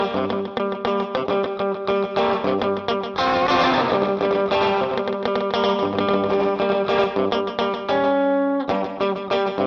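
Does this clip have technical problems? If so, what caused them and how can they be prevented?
Yes. A second, slower capture path was likely mixed in, causing a doubled audio track from 3.5 to 7.04 s: an equally loud, dry copy trailing by about a tenth of a second, starting and stopping abruptly. Route each source through a single capture path and check edits so no overlapping duplicate remains in the mix.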